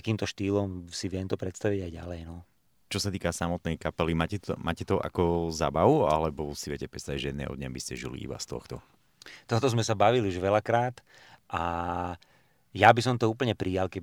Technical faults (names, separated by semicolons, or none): none